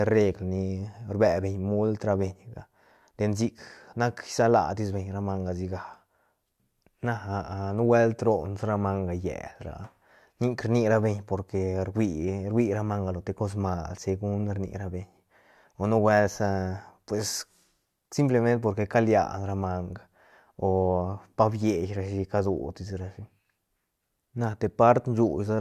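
Speech recording with no technical faults to report.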